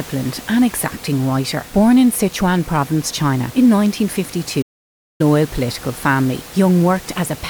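A playback stall hits the speech at 4.61 s. The player most likely ran short of buffered data, or its output thread was held up, so nothing reached the output for about 0.58 s. The speech cuts off mid-flow into dead silence, with even the faint room noise, roughly 20 dB below the speech, dropping out. At 5.21 s the sound resumes with "political family".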